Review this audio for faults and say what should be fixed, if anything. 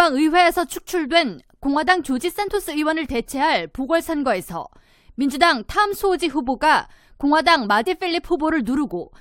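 There are two short blips from damaged data in the compressed stream, one at 2.47 s and one at 7.86 s, each a brief glitch in the speech. At those spots some bytes in the encoded file were corrupted, so the decoder couldn't read those frames, lost its place and had to resync on the next frame header. To prevent it, re-fetch or re-encode from a clean source and verify file integrity with checksums.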